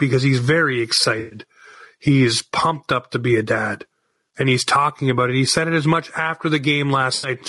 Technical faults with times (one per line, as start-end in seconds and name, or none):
0.00-7.49 gain pumping
0.00-7.49 low-delay AAC compression
1.19-1.38 AAC frame loss with concealment
7.15-7.29 AAC frame loss with concealment